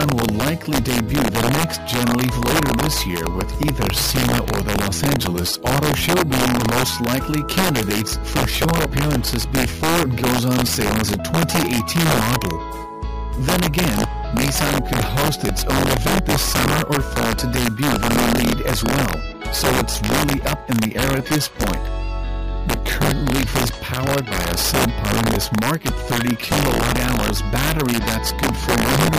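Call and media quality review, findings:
Integer overflow, full clip duration. Symptom: violent cracks on loud peaks, much harsher than clipping. Gain driven about 5 dB past full scale; around 2 percent of samples exceed the limit. Probable component: integer gain or mixing stage lacking saturation. Mechanism: peaks past maximum wrap to opposite sign, flipping across full range instead of being held at the limit. Fix: saturating arithmetic or headroom before the stage.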